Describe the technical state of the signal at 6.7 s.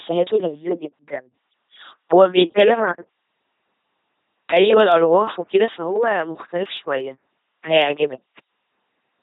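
The speech passes through an LPC-10 vocoder at 2.4 kbit/s, which rebuilds each moment from a pulse train or noise, leaving a buzzy, robotic sound with nothing above 3.8 kHz. Clock slip clicks run from 0.17 to 9.21 s, likely from two unsynchronised clocks differing by around 200 ppm. A single sample slips roughly every tenth of a second, producing a faint, regular ticking.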